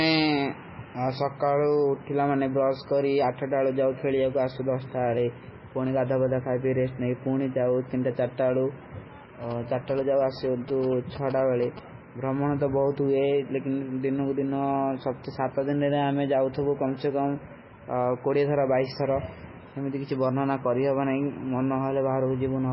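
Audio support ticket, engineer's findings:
MP3 compression, throughout: watery, swirly speech, weak frequency lines flickering on and off between frames, attacks smeared, nothing above 5.5 kHz. Likely a heavily starved MP3 encode, which fits a very low bitrate around 16 kbps.

GSM signalling bursts, 9.43–11.79 s, ending just before "ବ୍ରହମନୋ ତୋ ବହୁତ": galloping dit-dit-dit of short 217 Hz buzzes, about 15 dB below the speech. A nearby 2G phone's signalling bursts are rectified by the audio circuit.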